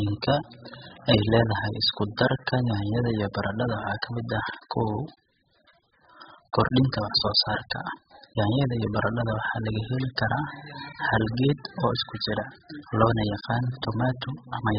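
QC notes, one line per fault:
Throughout: AAC compression, heavy, likely at a bitrate around 8 kbps. The speech sounds dull and smeared, with warbling, fizzy sibilants, because the encoder discards everything above 5 kHz and starves the bands below. A spectrogram shows a flat ceiling at 5 kHz.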